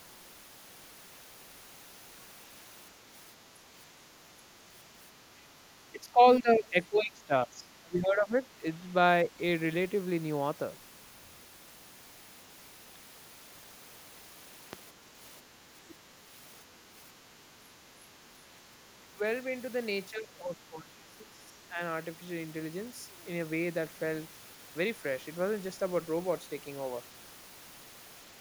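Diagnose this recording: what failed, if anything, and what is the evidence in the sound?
The talker's speech sinks by about 20 dB over 5.9 to 8.87 s, and again by about 10 dB at 19.01 to 19.21 s and about 15 dB at 20.1 to 21.8 s. This is speech suppressed in double talk. In call processing, the echo canceller likely confused the talker with loudspeaker echo during overlap and turned both down.

A single sharp loud pop, about 10 dB above the speech, lands at 14.73 to 14.75 s, with the speech carrying on beneath it. The cause is likely an electrical transient in the analogue wiring or a driver glitch, such as a switch, plug or static discharge.

A faint scrap of another voice, about 30 dB below the talker, slips in at 15.9 to 15.95 s. This is the other side's voice leaking through. The echo canceller likely left a brief residue of the far end's loudspeaker playback in the microphone signal.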